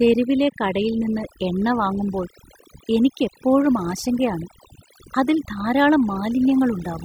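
Across the whole speech recording the background has dropped and broken up into twinkling, warbling specks. That is overdone noise removal: a noise reduction stage set far too aggressively has switched off individual frequency bands whenever they sat close to its noise estimate, taking the quieter parts of the voice down along with the background noise and leaving those isolated, flickering remnants behind.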